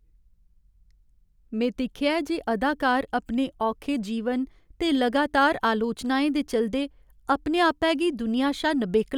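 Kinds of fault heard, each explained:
No technical faults can be heard in this speech recording. There is nothing to list for any kind of fault.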